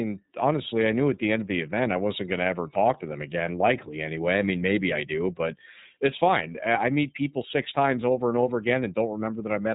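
Speech coded throughout with the iLBC codec: nothing passes above 3.8 kHz, and plainly audible roughness from independently coded frames fits 30 ms framing at about 13.3 kbps.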